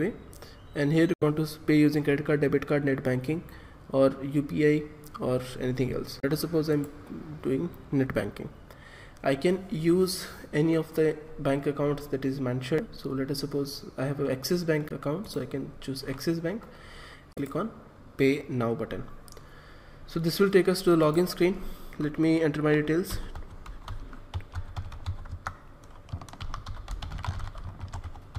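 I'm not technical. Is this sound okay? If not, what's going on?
No. There are five short glitches, at 1.14 to 1.23 s, 6.20 to 6.24 s, 12.78 s, 14.87 to 14.92 s and 17.33 to 17.38 s. They are caused by damaged data in a compressed stream: parts of the file are scrambled, so the player briefly misreads them and hunts for a clean spot. Each one is a brief glitch, often followed by a skip ahead.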